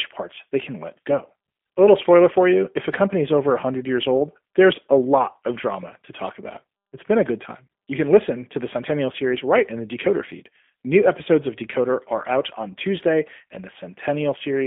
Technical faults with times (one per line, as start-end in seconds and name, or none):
0.00-14.67 G.729 codec